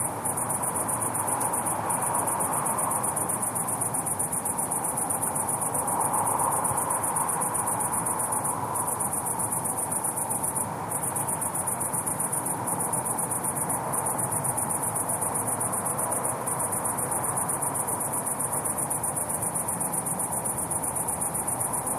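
No faults detected anywhere in the recording; nothing to flag.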